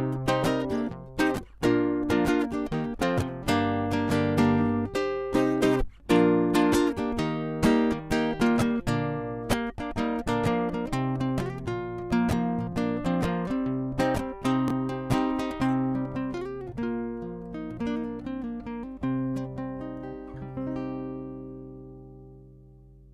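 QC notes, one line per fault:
12.72 s, chunks out of order: one block of about 5.8 ms plays one slot late. No audio is lost and none repeats, which sets it apart from a dropout or a stutter. The late block and the swapped neighbour create hard joins, heard as a brief garble.
14.68–14.70 s, chunks out of order: the same 5.8 ms block size, but the block lands three slots late, so the jumble runs longer than at 12.72 s. All the audio is still present, only misplaced. The misplaced block creates three hard joins, heard as a rough scramble rather than a gap.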